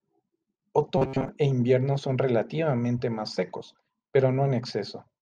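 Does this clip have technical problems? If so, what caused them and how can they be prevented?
Yes, from 0.98 to 1.28 s, just before "e invierno son relativamente", the speech turns into a metallic buzz at about 134 Hz: robotic sound from repeated short buffers. Most of that stretch is a roughly 7.5 ms chunk looped over and over, likely because audio arrived too slowly. A larger jitter buffer or a less loaded network and CPU should prevent it.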